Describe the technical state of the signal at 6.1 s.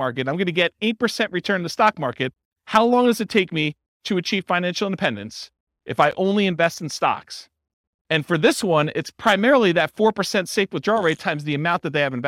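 At 6.11 s a 13 ms gap at a join of encoded pieces interrupts the speech. Encoder delay and padding leave brief silence, but nothing is lost, unlike a dropout.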